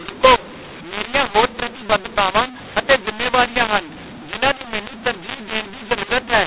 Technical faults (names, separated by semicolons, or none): mu-law and A-law mixed up